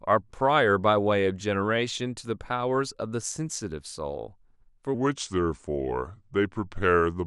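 From 4.94 s to the end at 7.27 s the speech turns deep and slow, a section at the wrong speed, likely played back at 0.84 times, about three semitones low.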